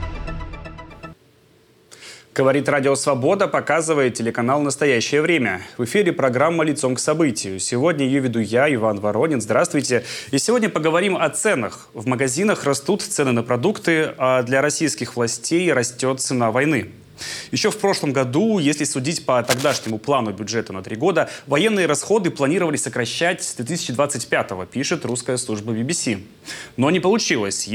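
From 19.44 to 19.91 s, a burst of cable scratch noise rustles over the sound, roughly 10 dB below it. The likely cause is a worn cable or connector being moved. Unlike isolated clicks or steady crackle, it is dense, uneven scraping confined to that half-second.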